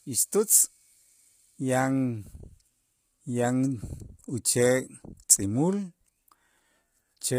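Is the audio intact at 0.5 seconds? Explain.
No. At 0.5 seconds the speech carries the same damage heard throughout, most likely low-delay AAC compression. Its short frames get too few bits to code the voice's harmonics cleanly, so at a starved rate, one that fits about 24 kbps, the sound turns rough and grainy, with noise filling between harmonics and nothing above 15.6 kHz.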